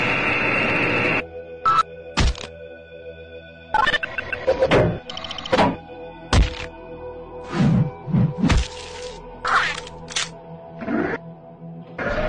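No technical faults can be heard anywhere here.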